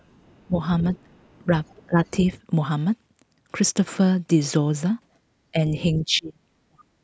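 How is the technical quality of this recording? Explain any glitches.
The recording has call-type glitches in the speech, concentrated in the first two seconds and near the end.

Other side's voice leaking through, from 0.0 to 0.46 s and from 0.96 to 2.11 s: a faint second voice sits far below the talker. It is likely loudspeaker echo that the echo canceller left in the microphone signal.

Speech suppressed in double talk, at 0.47 to 1.08 s, 1.87 to 2.0 s, 5.52 to 5.57 s and 6.03 to 6.94 s: the talker's voice dips, mildly at 5.52 s and nearly to silence in the final stretch. The canceller likely turned everything down while both sides overlapped.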